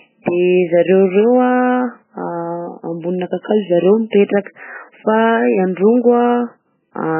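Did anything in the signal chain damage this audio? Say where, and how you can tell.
Yes. MP3 compression damage runs through the whole clip, likely introduced at the codec stage. The speech has nothing above 3 kHz, so sibilants lose their hiss and sound dull, and the heavy, watery swirl across the voice points to a very low bitrate, around 8 kbps. Starved of bits, the encoder cut the treble at a fixed point and dropped quieter frequency lines. Those lines flicker on and off from frame to frame, which gives the warbling texture.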